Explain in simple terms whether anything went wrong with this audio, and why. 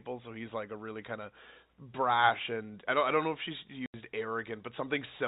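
Packet loss filled with silence, from 3.86 to 3.94 s. The speech suddenly drops out for 80 ms, with hard edges where the sound is cut off and then switched back on. The audio travels in small chunks, and some went missing on the way. The receiver had nothing to play, so it filled the gap with silence. The gap's length fits four chunks of 20 ms each. The narrow telephone sound comes from the call format itself.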